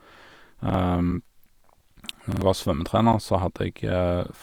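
At 0.70 to 0.74 s a repeated buffer makes the speech stutter. New audio arrived late, so a 46 ms block, which fits a 2048-sample buffer, played twice and about 50 ms of sound was lost. On a waveform the same shape appears twice with a hard seam. At 1.11, 2.12 and 3.13 s, one second apart, gaps between stream segments open silent holes of 5.9, 7.5 and 9.6 ms. Misaligned segment time stamps left space that the player filled with silence. Each gap shows as a flat line in the waveform and a thin vertical blank on a spectrogram. At 2.32 to 2.42 s a longer repeated buffer plays the same 46 ms block three times, losing about 100 ms. Identical patterns sit side by side in the spectrogram.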